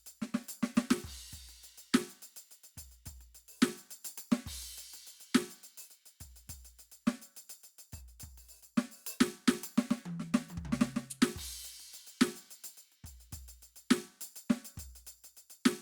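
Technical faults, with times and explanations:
No technical faults detected.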